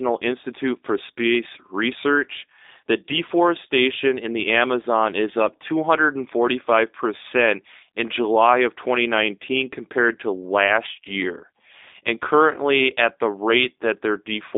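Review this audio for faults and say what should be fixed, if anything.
G.729 codec damage runs throughout: the speech sounds plainly rough and synthetic, rebuilt from a vocal tract filter and sparse pulses. Nothing passes above 3.8 kHz, and the band spans 300 Hz to 3.7 kHz, which fits an 8 kbit/s G.729A link. Route the call through a wideband, higher-bitrate codec.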